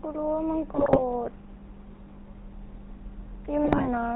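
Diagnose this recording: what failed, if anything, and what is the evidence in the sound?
The codec stage shows GSM full-rate coding throughout, which fits a 13 kbit/s stream. The speech has a plainly audible buzzy, gravelly roughness, because pulse-driven excitation replaces the real glottal signal. A spectrogram shows nothing above 4 kHz and a comb-like, coarse harmonic texture.

GSM bit errors at the network stage hit from 0.73 to 1.02 s and from 3.64 to 3.88 s, where the speech breaks into squawks, pops and gargling. Corrupted filter, pitch and gain parameters warp each frame, showing as smeared spectral blotches and sudden level spikes.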